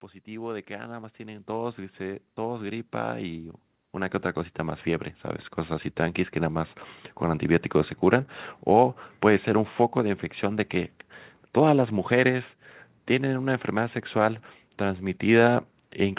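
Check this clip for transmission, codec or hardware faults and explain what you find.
One fault stands out: automatic gain rising, from 0.24 s to 7.51 s. The automatic gain control judged the incoming speech too quiet and kept raising its gain, about 17 dB in all, over roughly seven seconds. The speech grows steadily louder, and the background noise rises with it at the same rate. That shared rise separates it from a talker moving closer to the microphone, which would lift the voice far more than the room. The band-limited sound, with nothing above 4 kHz, comes from the call path and points to G.711 mu-law at 64 kbps.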